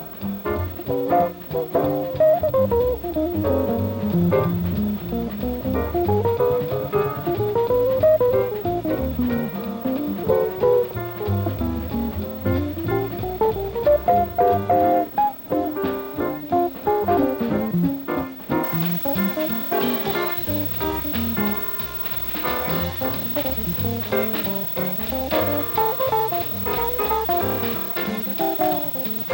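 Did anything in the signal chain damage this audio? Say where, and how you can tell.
Yes. From 18.64 s to the end, pre-emphasis was left on in transmission: the treble jumps about 11 dB at 10 kHz, consistent with an unreversed J.17 curve, not gradual EQ drift.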